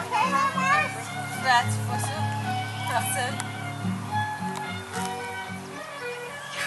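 No technical faults can be heard anywhere in the recording; the signal holds steady without any audible disruption.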